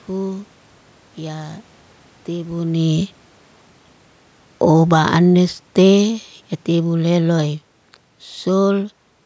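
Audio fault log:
4.54–7.57 s, automatic gain falling: the level sinks steadily by about 7 dB over three seconds as the gain control, judging the input too loud or its background noise too strong, turns itself down. Unlike a talker leaning back, the room noise drops together with the speech.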